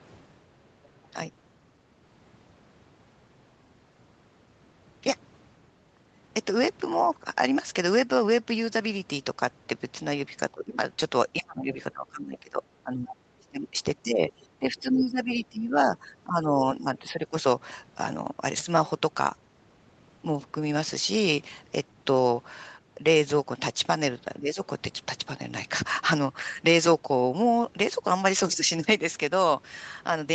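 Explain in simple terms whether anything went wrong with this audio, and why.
Yes, two things went wrong. The first is the other side's voice leaking through: from 0.83 to 1.08 s a very faint second voice sits under the speech. That is likely an echo canceller missing some loudspeaker sound. It is an added voice, not damage to the main one.

The second is speech suppressed in double talk: the talker's own speech dips, dulls or breaks up at 1.13–1.17 s, 10.52–10.78 s, 11.4–13.79 s (the deepest), 14.03–15.77 s, 15.95–17.36 s and 24.39–24.58 s. Unlike a network dropout, the sound likely sags because someone else talks over it.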